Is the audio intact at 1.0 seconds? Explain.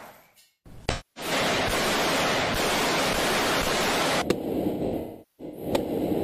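No. AAC frame loss with concealment covers 0.89 to 1.32 s, so 1.0 s falls inside it. About 256 ms of coded audio never reached the decoder, a gap that fits roughly six AAC frames. The decoder filled it by reusing the last good spectrum, scrambling its signs or interpolating its energy. At 1.0 s you hear a smeared, noisy or phasey substitute instead of the real signal.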